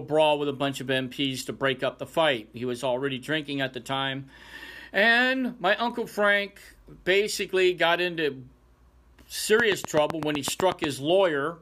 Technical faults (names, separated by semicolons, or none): train of clicks